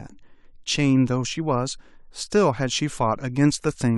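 Speech with word clock ticks running from 0.12 s to 3.69 s: around ten clicks at a steady rate of roughly one every 0.3 s. Each marks a single sample dropped or repeated as an unlocked receiving clock slips against the sender's, which points to a mismatch of roughly 70 ppm.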